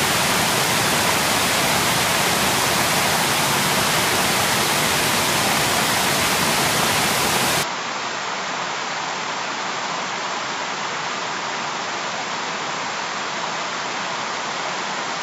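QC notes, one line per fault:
7.63–15.23 s, input switched to a poorer device: capture likely moved to another input mid-recording; the sound turns duller with nothing above 7.6 kHz, a little quieter, with faint new background noise and no gap.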